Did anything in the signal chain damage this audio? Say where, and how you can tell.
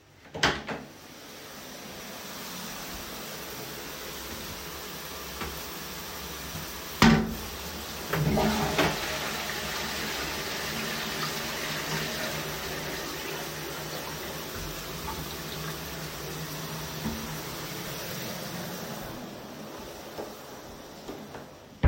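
No, nothing in the chain damaged these everyday sounds.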